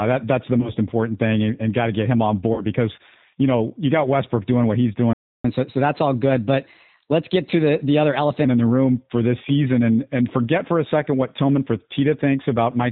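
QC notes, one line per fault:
Throughout: G.729 codec. The speech has the plainly audible roughness of a low-rate CELP coder, which fits an 8 kbit/s G.729A stream. Each 10 ms frame is rebuilt from a vocal tract filter, a pitch predictor and a few fixed pulses, so the fine waveform detail is replaced by a coarse pulse model. That gives a slightly synthetic, grainy texture. Nothing above 4 kHz survives, so the sound is dull and lacks sibilant crispness.
0.61–0.71 s and 2.54–2.64 s: VoIP packet loss concealed by the speech codec. Audio went missing, about 20 ms in the first event and 40 ms in the second, and the decoder filled each gap by extending its last pitch and filter settings at falling gain. The gap turns into a short stretched, fading sound. Because each frame is predicted from the previous one, the speech stays weak and slightly distorted for a moment after real data resumes, so each disturbance lasts about 0.1 s.
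5.13–5.45 s: playback stall. The sound stops mid-flow and leaves about 0.31 s of silence, then picks up again. A gap like this, with no concealment sound and a clean restart, is likely caused by the player's buffer running dry or its output thread being blocked. No audio is generated until data is available again.
5.45–8.45 s: catch-up at higher speed. Right after the stall, playback runs at 1.1 times normal speed for about 3 s. The player resamples its backlog to recover the lost time, so tempo and pitch rise together, by roughly a semitone and a half, giving a slightly hurried, higher-pitched quality. At about 8.45 s the rate drops back to normal and the pitch settles to its earlier level.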